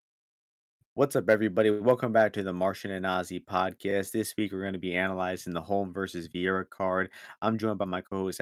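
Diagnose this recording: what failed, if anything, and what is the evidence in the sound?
A short stall from a late packet occurs at the network and jitter-buffer stage, from 1.71 to 1.82 s. A speech sound is held unnaturally long, with a faint buzzy sustain. The packet due at 1.71 s had not arrived, so the buffer ran dry and the receiver extended the last audio for 86 ms until data resumed. Playback then continued from the same point, so nothing is lost, but the stream now runs 86 ms later than before.

Chunks out of order appear around 3.88 to 3.92 s, also at the network or buffer stage. The speech is briefly jumbled. A 10 ms chunk was delivered or written three chunks late, so it plays after audio that should have followed it. No samples are missing; the sequence is wrong, creating three discontinuities where unrelated waveform segments butt together.

A jitter buffer speed-up runs from 7.39 to 8.25 s. 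The speech sounds rushed, about 10 percent faster, yet the pitch is unchanged. After the buffer had filled past its target, the receiver repeatedly cut out short pitch-period-length pieces of audio to drain the excess, removing roughly a tenth of a second in total. This time-compression shortens the timing while preserving pitch.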